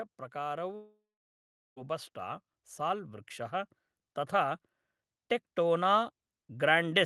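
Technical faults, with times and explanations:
0.32–4.60 s, automatic gain rising: the speech and the background swell together, slowly, by about 6 dB across these four seconds. The automatic gain control judged the input too quiet and kept raising its gain step by step, so everything grows louder evenly.
0.75–1.78 s, long network dropout: the last sound is drawn out into a fading buzz or hiss, then sinks to silence lasting about 0.75 s, and the speech resumes with roughly a second simply missing. The likely cause is that no packets arrived, so the receiver padded the gap.
5.55–7.05 s, automatic gain rising: the voice and the background rise together, gradually, up to the end of the clip. The gain control again found the level too low and pushed it up smoothly, so the whole mix climbs without any jump.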